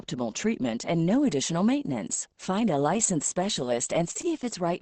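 From 2.93 s to 4.45 s the speech turns repeatedly rough and grainy in short 20 ms patches, about eighteen of them, clustered most densely between 2.93 and 3.13 s and again between 3.55 and 4.25 s. There are no gaps. Each patch is a lost packet rebuilt from error correction. The following packet carried a low-bitrate backup copy of the missing 20 ms, and the decoder played that coarser copy in its place, so those frames come out noisier than their neighbours.

Around 4.13 s and again at 4.21 s there are brief smeared wobbles, each lasting a couple of hundredths of a second, where the sound seems held over rather than freshly spoken. These are short concealed packet losses. About 20 ms of audio arrived too late, and the receiver filled most of the hole by extending the preceding sound before fading back into real audio. The codec's own coding noise and the high-frequency ceiling near 8 kHz run underneath throughout.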